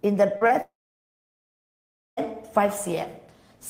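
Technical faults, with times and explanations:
0.37–0.43 s and 0.47–0.51 s, short concealed packet loss: about 40 ms then 20 ms never arrived; the receiver extended the preceding sound, leaving brief smears.
0.61–2.19 s, long network dropout: audio likely stopped arriving for about 1.6 s; the last sound briefly continues, then near-silence fills roughly 1.5 s before the audio resumes later on.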